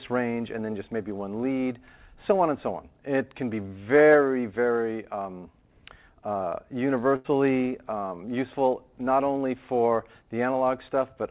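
From 7.16 to 7.26 s, a burst of packet loss: about 80 ms vanishes, bridged by the last sound held and fading, a smeared, dimming spectrogram band.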